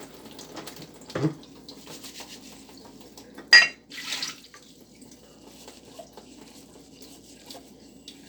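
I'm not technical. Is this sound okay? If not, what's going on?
Yes, it's fine. Nothing wrong can be heard.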